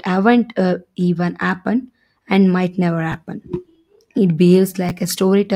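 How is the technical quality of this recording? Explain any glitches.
The recording has two brief glitches, both from chunks out of order. They occur at 3.12 to 3.14 s and at 4.89 to 4.91 s. In each, a 10 ms chunk of speech arrives one chunk late. It plays after the chunk that should follow it. No audio is lost, but the order is swapped. The three hard joins at each spot produce a momentary jumbled smear in the speech.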